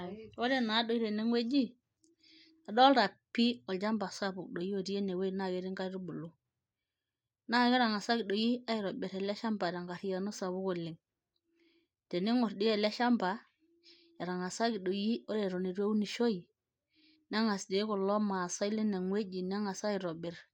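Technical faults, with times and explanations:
No technical fault can be heard anywhere in this speech recording. There is nothing to mark with a time or to explain.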